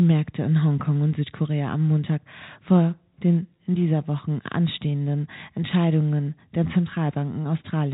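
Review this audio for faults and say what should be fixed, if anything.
Nothing to fix: the speech arrives over a G.711 A-law telephone path, narrowband as that format dictates, with no faults heard.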